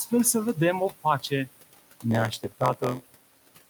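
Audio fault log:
Throughout: noise suppressor artifacts. The steady room noise, sitting about 18 dB under the speech, gets pulled down by roughly 17 dB in the gaps and swells back under the voice, so the background pumps.
2.10 to 3.70 s: block size mismatch (padded). From here on each block comes up short and gets topped up with silence, which fits a 512-sample read size. Those little gaps repeat at 86.1 Hz as a buzz, and the speech drags to 0.938 of its proper speed with timbre roughly unchanged.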